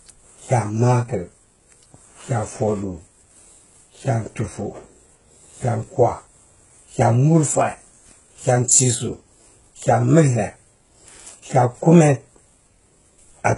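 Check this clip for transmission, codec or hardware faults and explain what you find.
One codec problem runs through the whole speech clip. It's likely HE-AAC compression, heavily damaged and nothing above 11.1 kHz, which fits a very low bitrate around 12 kbps. The treble is mostly rebuilt from copies of lower bands, so sibilants come out gritty, metallic and lispy.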